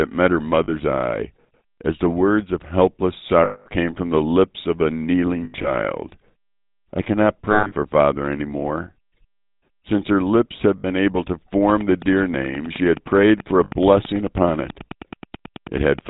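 This speech clip has been through the GSM full-rate codec at 13 kbit/s, and the damage is plainly audible. The codec drives a vocal-tract model with sparse, regularly spaced pulses. The result is a buzzy, gravelly roughness. Nothing above 4 kHz survives, so the sound is dull and narrow throughout. Lost GSM frames break in six times. At 0.64 s, between "met her" and "eye as the words", a 40 ms gap is patched. That fits two missing 20 ms frames. At 3.44 s a 220 ms loss gives the longest hold. At 5.44 s, after "the lips of a", 140 ms goes missing across 200 ms, with the longest stretch about a tenth of a second. At 7.52 s, 180 ms is lost across 200 ms, with one run of roughly 150 ms. Shorter losses follow at 10.78 s (60 ms) and 13.64 s (80 ms). Each time the decoder repeats the last good frame. That leaves a rough, metallic ring. A train of clicks starts at 11.70 s, just after "able to", and runs to 16.00 s. 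The ticks are regular, about 9.3 per second, roughly forty in all. They peak about 5 dB above the speech and carry on through pauses. Interference from nearby equipment or a faulty connection is the likely cause.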